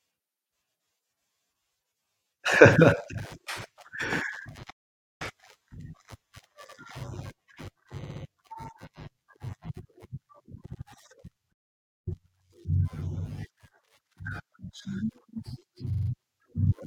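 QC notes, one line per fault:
4.70–5.22 s and 11.52–12.08 s, playback stall: the speech cuts out mid-flow into dead silence for about half a second each time (roughly 0.50 s, then 0.54 s). The likely cause is the player running short of data, or its audio thread being blocked, so nothing reached the output until it caught up.
6.68–6.77 s, 8.03–8.22 s, 10.72–10.80 s, 15.92–16.09 s, repeated frames: short stutters where a fragment of speech plays again. At 6.68 s and 10.72 s an 85.3 ms block repeats once. At 8.03 s a 64.0 ms block plays three extra times, adding 192 ms. At 15.92 s a 42.7 ms block plays four extra times, adding 170.7 ms. The block lengths fit a few compressed frames written or sent more than once, so the decoder replays them and the clip runs longer.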